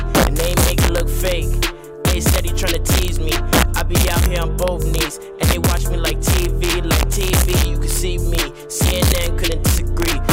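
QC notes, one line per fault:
throughout – integer overflow: the signal runs about 2 dB hotter than the integer range allows, and around one percent of samples exceed the limit. Those samples wrap to the opposite extreme instead of being held at the ceiling, so each loud peak becomes a violent crack, harsher than clipping. On a waveform the peaks jump from the top rail to the bottom. A spectrogram shows thin full-height vertical lines at each loud moment.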